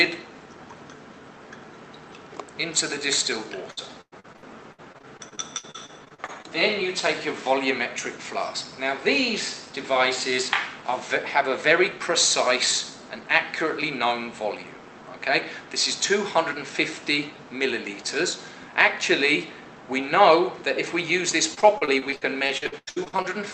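From 3.71 to 6.46 s, repeated packet loss (robotic sound) breaks the audio into choppy fragments with pieces missing. Packets keep going missing. Each hole, the longest about 108 ms, is patched by stretching the last sound. About a quarter of that stretch is patched. The same robotic chopping returns from 21.54 to 23.26 s, with holes up to 90 ms and a third concealed. The call path's top end stops near 8 kHz.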